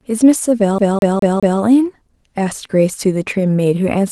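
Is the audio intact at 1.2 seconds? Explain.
No. A CD stuck on one turn spans 0.78 to 1.61 s, covering 1.2 s: a scratch throws the laser back one track each revolution, so the same 0.21 s of speech repeats four times, each jump marked by a brief mute, giving a fast, even stutter.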